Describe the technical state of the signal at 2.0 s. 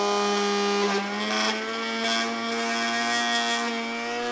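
The signal at 2.0 s is intact, with no fault to be heard at that moment.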